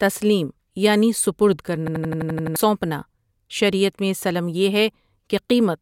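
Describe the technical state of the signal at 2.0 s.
A system hang loop runs from 1.88 to 2.56 s. One 85 ms buffer repeats eight times, stuttering at 11.7 Hz. About 0.7 s of sound is lost.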